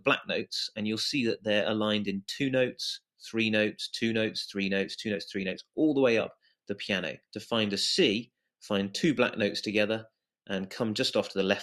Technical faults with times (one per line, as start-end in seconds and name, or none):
none